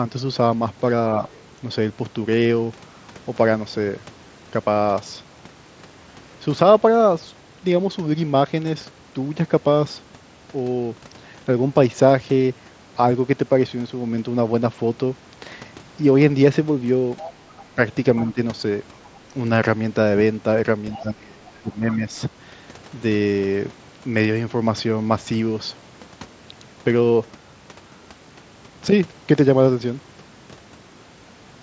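At 1.29 s, the other side's voice leaks through for about 0.13 s. It is very faint, roughly 30 dB under the speech. The likely cause is an echo canceller that left some loudspeaker sound in the microphone signal.

At 16.29 s there is a concealed Bluetooth headset packet loss. About 7.5 ms of audio went missing between headset and phone. The receiver filled the gap by repeating a matching stretch of recent waveform, so it is nearly hidden.

From 17.2 to 19.16 s the other side leaks through again, much louder, around 15 dB under the speech. Within that span, from 17.75 to 18.39 s, speech is suppressed in double talk. Short pieces, about 100 ms in total, drop by up to roughly 10 dB. Both sides were likely talking at once, and the canceller probably turned the talker down with the echo.

From 20.93 to 21.96 s the leaking voice returns, about 20 dB under the speech. From 21.0 to 22.12 s suppression is heavier. 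Roughly a second of speech is pulled down, by as much as about 25 dB, while the other side is heard.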